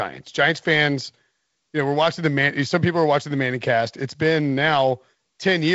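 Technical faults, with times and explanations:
The speech is carried through G.722 wideband telephone coding at 48 kbit/s, so nothing is present above 7.7 kHz, with a light hiss in the upper band and a little extra noise in the lower band at that rate.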